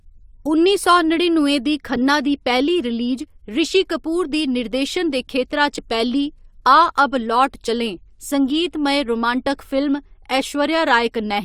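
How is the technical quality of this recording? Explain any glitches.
The speech has two short dropouts where compressed frames were skipped, at 5.77 s and 7.68 s. Whole frames were missing or rejected by the decoder, so playback jumps ahead, about 50 ms at the first point and about 20 ms at the second.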